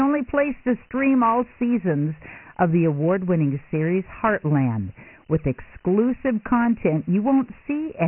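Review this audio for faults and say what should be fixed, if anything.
Dialogic VOX ADPCM runs through the whole speech clip, and the damage is heavy. Nothing remains above 3 kHz, which fits 4-bit ADPCM at 6,000 samples a second, about 24 kbps. Each sample stores only a coarse step from a predicted value, so a gritty hiss rides along with the speech and comes and goes with it. That distinguishes it from plain telephone band-limiting, which dulls the top but leaves the sound clean. To prevent it, record or archive in linear PCM and keep VOX only as a final delivery format.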